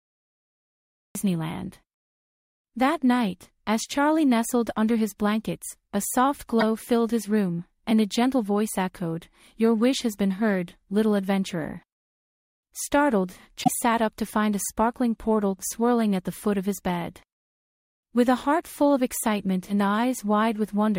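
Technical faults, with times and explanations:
0.00 to 1.15 s, cut-off start: there's dead digital silence until 1.15 s, then the sound drops in already under way, with no attack or fade-in. The capture clearly began late, so whatever was happening before that point simply isn't there.
6.60 to 6.63 s and 13.60 to 13.68 s, damaged data in a compressed stream: two short glitches where corrupted bytes hit the decoder. It can't make sense of those frames and loses sync while it hunts for the next valid frame header.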